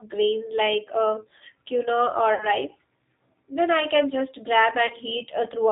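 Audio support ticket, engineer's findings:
G.729 codec, whole clip: speech passes through a low-rate CELP coder, which fits an 8 kbit/s G.729A link. Band-limited, nothing above 4 kHz. Voice rebuilt from filter, pitch and pulse model, so codec damage plainly audible: rough, slightly synthetic texture on every syllable.

VoIP packet loss concealed by the speech codec, 2.34–2.49 s right after "grains like uh quinoa", and 4.87–4.94 s after "I can just". Missing audio fits about 60 ms, then 30 ms, of dropped packets. Decoder extends last pitch and filter at falling gain, giving a brief fading smear, with weakened speech lingering past each gap.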